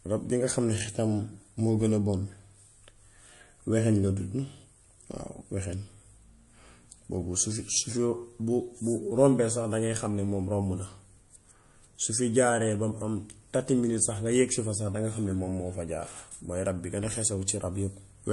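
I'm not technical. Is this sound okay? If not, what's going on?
No, not quite. All the way through, the speech sounds watery and swirly, the s sounds come out metallic and smeared, and the top end is simply missing, with nothing above about 11.3 kHz. That pattern is most likely MP3 compression squeezed too hard: the encoder chops off the treble and drops quieter detail that flickers in and out, which gives that underwater wobble you can plainly hear.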